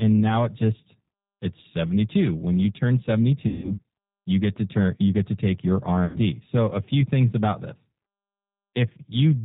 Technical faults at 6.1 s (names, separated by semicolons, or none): G.729 codec; VoIP packet loss concealed by the speech codec